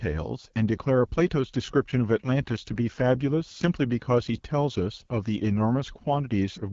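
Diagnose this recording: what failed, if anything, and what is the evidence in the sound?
The codec stage failed. The whole clip carries AMR wideband (HD Voice) codec damage, and it is plainly audible. The speech sounds rough and raspy from start to finish. There is nothing above 7.5 kHz. The codec models speech up to 6.4 kHz with a pulse-excited vocal tract filter and fills the band above that with shaped noise. The harsh texture points to one of its two lowest rates, which fits 8.85 kbit/s.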